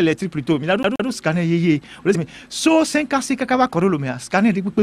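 From 0.83 to 1.08 s there's a CD stuck on one turn: a scratch keeps knocking the laser back, so a 127 ms slice repeats twice with tiny mutes between.

At 2.14 s compressed frames get skipped, and the sound jumps ahead roughly 70 ms, which fits a few dropped 23.2 ms frames.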